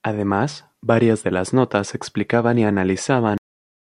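The final buffers were never written out, giving a cut-off end at 3.38 s: the speech stops mid-sound and drops straight into digital silence with no decay.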